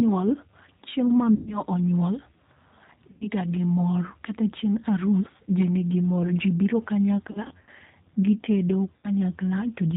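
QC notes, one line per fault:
Throughout: G.729 codec. The speech has been squeezed to about 8 kbit/s, which fits G.729A. Each 10 ms frame is rebuilt from a vocal tract filter, a pitch predictor and a few pulses. Nothing above 4 kHz survives, so the sound is dull and band-limited. The damage is plainly audible. Voiced sounds come out rough and slightly synthetic.
1.35 to 1.61 s, 3.11 to 3.28 s, 7.31 to 7.70 s, 8.96 to 9.11 s: VoIP packet loss concealed by the speech codec. Four dropouts occur. The first comes just after "chieng' ma" and covers about 120 ms of lost audio, which suggests six packets. The second ends just before "ga gi mor" and loses about 100 ms. The third is scattered over 360 ms, with about 180 ms missing in total and no gap longer than 80 ms. The fourth follows "gi tedo" and loses about 80 ms. In each gap the decoder repeats its last pitch and filter at falling gain. That turns the sound into a fading buzz or coloured hiss. 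Recovery lags briefly after the audio resumes, because each frame depends on the one before.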